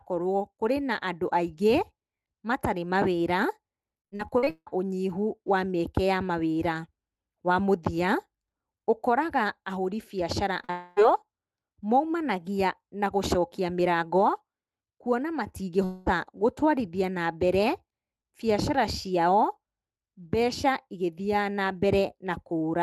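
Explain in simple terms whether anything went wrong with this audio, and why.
Yes, a few things went wrong, all from the network carrying this speech call.

Between 4.01 and 4.68 s, right after "matarĩ mawĩra", there's repeated packet loss, which gives a robotic sound. Seven bits of audio went missing in quick succession, the longest about 0.16 s. Each time, the receiver patched the hole by stretching out the last sound it had, so about half of that stretch is filler. That's why it sounds choppy rather than just having gaps.

At 10.64 to 10.70 s there's a short concealed packet loss: about 40 ms of audio didn't arrive in time. The receiver carried the previous sound forward to cover it and then blended back in. You hear a quick smear or wobble, and a tiny bit of what was said is simply gone.

Straight after that, from 10.70 to 10.98 s, comes what sounds like a long network dropout, likely audio stopping arriving for about a quarter of a second. 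The gap was covered entirely by a fading continuation of the last sound, a drawn-out tail, with no real audio underneath. The same happens from 15.84 to 16.08 s, just before "gũtwarithia na mbere". Roughly 0.22 s is replaced by that stretched-out filler, and the speech picks up again afterwards without the part that was lost.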